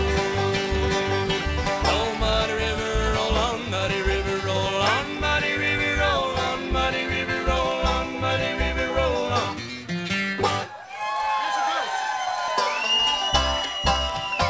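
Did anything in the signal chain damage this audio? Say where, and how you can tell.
Yes. Bit error spikes sit at 7.72 s and 14.10 s, each a single sharp broadband tick unrelated to the surrounding sound. They point to the digital link or memory, where a flipped bit throws one to three samples off by a power of two before the value snaps back.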